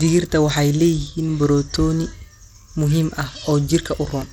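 Throughout the speech, the audio was likely squeezed through Bluetooth SBC compression at a starved bit pool, pointing to roughly 96 kbps. Its coarse sub-band quantisation leaves the treble flickering and thin, with a plainly audible gritty, aliased haze riding on the speech.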